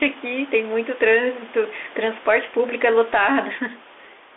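From start to finish the speech passes through a Bluetooth CVSD headset codec, the narrowband one-bit delta scheme whose adaptive step tracks the waveform only up or down, which fits a 64 kbit/s CVSD link. The band runs from about 300 Hz to 3.5 kHz, and a spectrogram shows a hard ceiling with nothing at all above 3.8 kHz. The damage is plainly audible: s sounds turn scratchy, louder bright syllables distort, and a granular hiss fills the band.

Across the whole clip there is also gain pumping. The background includes room noise sitting about 29 dB below the speech. The level swings by about 5 dB, so loud and soft passages sound squashed together. The likely cause is excessive input gain held down by a fast limiter or compressor.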